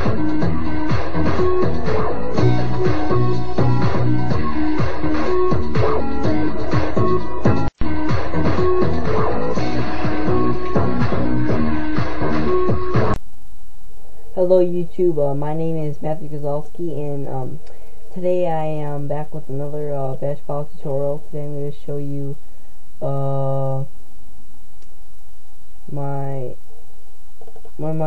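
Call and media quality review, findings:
Nothing to flag here, as no faults turned up anywhere in the audio, so there's no ticket to raise.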